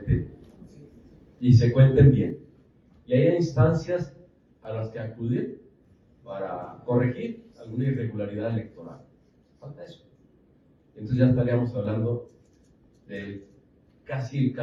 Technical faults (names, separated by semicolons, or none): one channel drops out